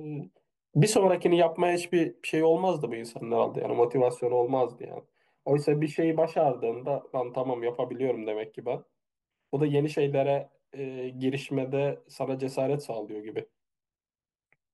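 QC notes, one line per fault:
No faults found in this clip.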